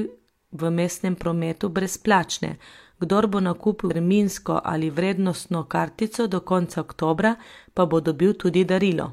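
At 3.86–3.91 s the speech jumps ahead with about a fifth of a second missing: compressed frames skipped, several 46.4 ms frames lost.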